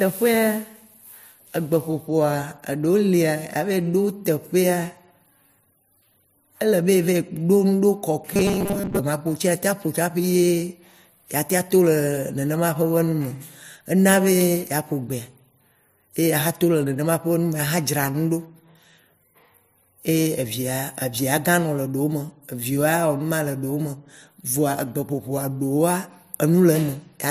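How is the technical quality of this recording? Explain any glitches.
One glitch stands out. From 8.34 to 9.01 s the speech collapses into robotic sound from repeated short buffers. The voice becomes a rigid, metallic buzz at a fixed 200 Hz pitch, loosely tracking the syllables. The likely cause is audio arriving too slowly, so the software kept replaying its last fragment. A 200 Hz buzz fits a repeated 5 ms slice. Most of that stretch was repeated material, and the real audio there was skipped.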